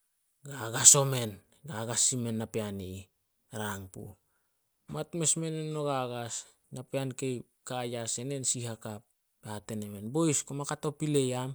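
No technical faults are audible.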